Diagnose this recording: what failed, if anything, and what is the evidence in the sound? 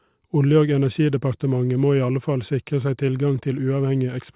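Nothing failed; no stage shows any audible problem.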